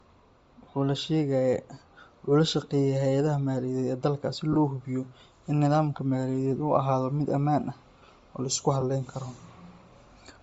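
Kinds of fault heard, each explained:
Bluetooth LC3 compression: The speech has a breathy, grainy top end throughout. This is likely LC3 coding at a low rate, which fits about 32 kbps.
Lost LE Audio frames: Brief noisy smears replace the speech where frames dropped, at 4.53 s after "ee dalka si" and 8.81 s after "ah oo la isku".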